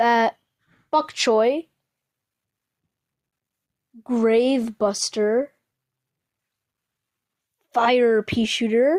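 No technical faults can be heard in this recording.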